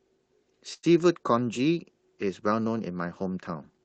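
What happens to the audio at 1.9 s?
Nothing goes wrong at 1.9 s; the speech carries on intact there, passing through the call path as it does throughout.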